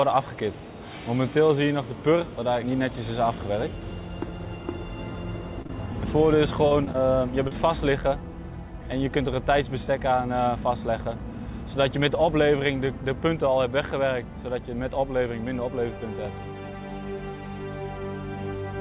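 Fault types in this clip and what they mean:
Short concealed packet loss: five 20 ms gaps between 5.62 and 7.48 s, each bridged by extending the preceding sound, heard as brief smears or wobbles.
Short stall from a late packet: at 5.67 s the jitter buffer emptied, holding the preceding sound 26 ms too long before resuming with nothing lost.
Dropped buffer (overrun): small forward jumps at 8.92 and 16.25 s, losing roughly 10 ms and 5 ms, likely from samples overwritten before being read.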